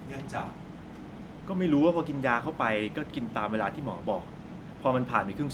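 No technical faults can be heard anywhere in the recording, so there is nothing to list in time order.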